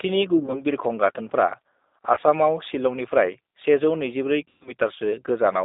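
G.729 codec throughout: the 8 kbit/s coder rebuilds the speech from filter and pulse models inside a 250 Hz to 3.7 kHz line band, leaving it plainly rough and synthetic.

VoIP packet loss concealed by the speech codec at 0.38 to 0.62 s, 2.15 to 2.19 s and 4.45 to 4.72 s: the decoder stretches the last sound into a fading fill over gaps of about 80, 20 and 160 ms. The longest, a 120 ms run near 4.5 s, leaves the speech weakened as it recovers.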